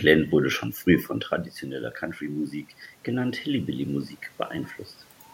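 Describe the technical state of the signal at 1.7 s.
At 1.7 s you're right at the start of an automatic gain rise, running from 1.62 to 4.12 s, just after "wurde schon früh von". The input had dropped by about 9 dB, around where the talker moved back near 1 s, so the AGC slowly pushes its gain up by about 4 dB. Voice and room noise swell together over those two and a half seconds.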